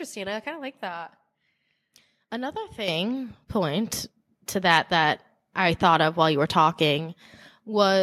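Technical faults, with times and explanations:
2.88 s and 3.9 s, microphone volume stepped up: the input gain jumps by about 8 dB, then about 4 dB more just before "to that that I", as software raises the microphone level. Voice and background rise together, so the waveform envelope and the spectrogram's noise floor step up abruptly.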